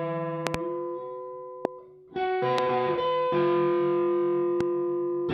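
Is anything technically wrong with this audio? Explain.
Yes. Loud pops occur: a double pop at 0.47 to 0.57 s, then single pops at 1.65 to 1.67 s, 2.58 to 2.61 s and 4.61 to 4.63 s. The first three peak about 20 to 25 dB above the sound, the last about 10 dB. Each is likely a voltage pulse from a plug, switch or static discharge, heard as a sharp thump over the sound, which continues underneath.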